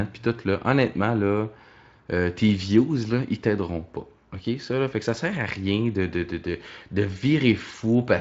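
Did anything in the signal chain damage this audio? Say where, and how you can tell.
No, nothing in the chain has damaged this speech, so there's no stage to point at and nothing to fix here.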